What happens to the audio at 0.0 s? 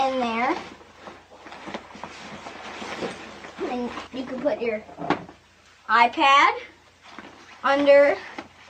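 Nothing goes wrong at 0.0 s; the audio starts cleanly and is intact at that moment.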